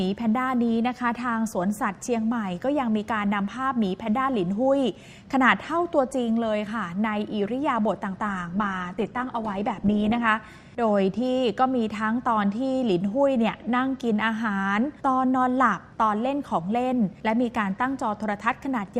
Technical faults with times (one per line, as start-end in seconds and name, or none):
8.27-10.27 adaptive stream at a lower bitrate